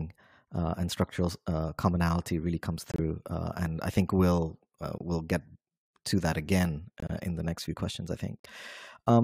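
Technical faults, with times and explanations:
2.90 to 3.00 s, 4.98 to 5.02 s, 7.00 to 7.19 s and 8.40 to 8.46 s, corrupt frame muted: after "uh commonality really comes", "I think we'll uh" and "next few questions I", and once near 7.0 s, the speech drops abruptly into true silence for 0.04 to 0.19 s. Damaged compressed frames were rejected by the decoder and replaced with nothing. The gap lengths suggest whole codec frames were lost. Unlike concealment, nothing is smeared or repeated, and unlike a dropout, the speech resumes exactly on time.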